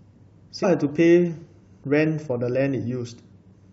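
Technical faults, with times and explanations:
0.63 s, damaged data in a compressed stream: a brief glitch breaks into the speech. Corrupted bytes in the encoded stream make the decoder misread the affected frame and lose sync until it locks onto the next valid frame header.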